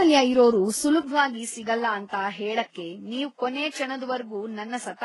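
Transcoding between lossy codecs runs through the whole speech clip. The smeared, swirly artefacts of two different codecs sit on top of each other, and nothing is heard above 11.5 kHz. The sound suggests a low-bitrate HE-AAC-style encode that was likely re-encoded afterwards as Vorbis.

An input switched to a poorer device comes at 1.01 s, after a brief silence of about 20 ms. From there to the end the band closes to 9.9 kHz, the level falls by roughly 5 dB, and a faint new noise floor appears far below the speech. This likely comes from a change to a lesser microphone or headset path.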